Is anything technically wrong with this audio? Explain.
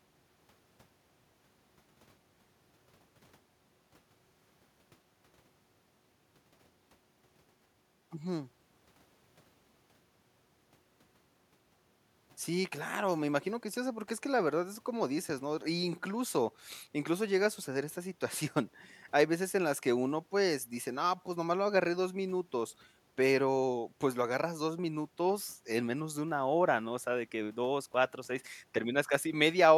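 No, nothing in this speech recording stood out as a technical problem on listening.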